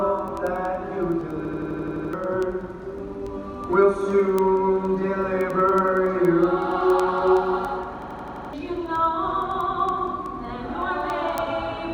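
From 0.19 s right to the end there are word clock ticks, sharp clicks about every tenth of a second, because the receiver's clock is running roughly 200 ppm off the sender's.

At 1.45–2.13 s and again at 8.02–8.53 s, a system hang loop repeats one 85 ms slice (11.7 Hz machine-gun stutter, consistent with a 4096-sample buffer), losing roughly 0.7 s and 0.5 s of audio.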